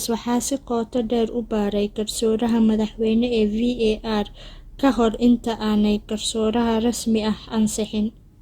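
A speech recording carries generation loss from start to finish: a swirly, smeared, hollow quality that is heavier than a single lossy encode would leave, with consonant attacks blurred. The likely cause is repeated re-encoding, about four passes through a codec, which fits Opus at 64 kbit/s. Plain low-bitrate coding would trim the top end, but here content reaches 20.1 kHz. The damage instead comes from each pass requantising on a shifted frame grid, so noise piles up.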